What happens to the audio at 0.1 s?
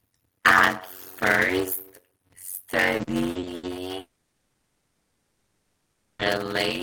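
At 0.1 s the speech already shows a block size mismatch (padded), present through the whole clip. Each block is only partly filled, which fits 256-sample writes, and the rest is padded with silence. That gives a buzz at about 92 Hz. The speech plays at 0.53 times normal speed, with pitch roughly unchanged.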